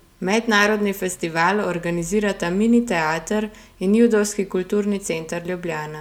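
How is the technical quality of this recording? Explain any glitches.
The technical quality of the recording is sound, with no glitches to explain.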